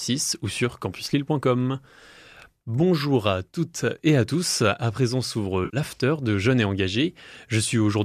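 Speech clip. At 5.65 to 5.77 s there is AAC frame loss with concealment. About 80 ms of audio goes missing, which fits roughly eight lost frames. The decoder fills the gap from the last good spectrum, leaving a brief smeared, noisy patch. The stream itself is likely low-delay AAC, and its compression damage is light.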